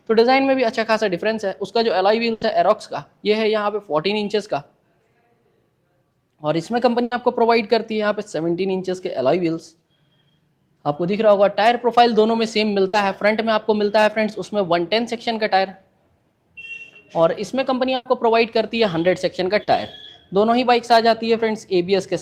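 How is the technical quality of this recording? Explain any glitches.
The recording has five packet-loss dropouts. Four are bursts of packet loss, at 2.33, 7.03, 12.87 and 17.95 s. At each one the receiver stretched out the last bit of audio for about 60 to 100 ms, fading it as a buzz or hiss. The audio then jumps ahead, missing that stretch.

The fifth is a short concealed packet loss at 19.63 s. About 40 ms was patched by extending the preceding sound and blending back, so you hear a quick smear or wobble.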